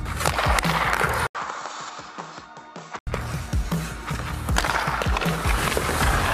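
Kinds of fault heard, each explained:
Input switched to a poorer device: at 1.27 s the sound turns dull, losing everything above 7.8 kHz, about 5 dB quieter with new hiss, likely a different microphone, clearing at 3.07 s.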